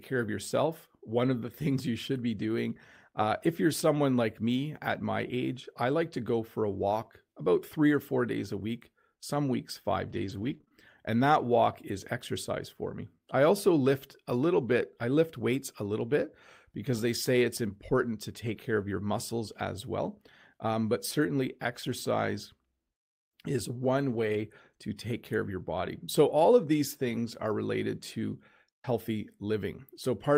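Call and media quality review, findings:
Repeated packet loss (robotic sound), 10.09–10.72 s, right after "week some weeks five": choppy speech with pieces missing. Network jitter/loss path: several short dropouts (longest 18 ms), each patched by extending the previous sound. About 11% of the span is concealed.

Lost packet rebuilt from error correction, 18.47–18.49 s, between "say it's important to" and "care of your muscles": brief grainy, noisier patch with no gap. The decoder substituted the low-bitrate redundant copy carried in the following packet (Opus in-band FEC).

Lost packet rebuilt from error correction, 24.09–24.39 s, just before "to take care of": longer rough, noisy stretch with no audible gap. 160 ms came from redundant copies, which fits eight separate lost 20 ms frames.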